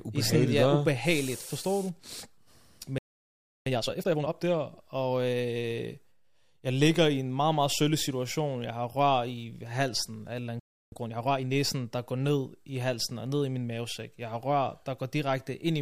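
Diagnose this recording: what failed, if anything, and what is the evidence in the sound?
Playback stall at the player stage: the speech drops to silence at 2.98 s for about 0.68 s, then at 10.59 s for about 0.32 s, likely from buffer starvation or a blocked thread.

Time-compressed catch-up follows each gap: 3.66 to 4.32 s runs at 2x and 10.92 to 11.56 s at 1.5x. Pitch holds while the backlog gets trimmed.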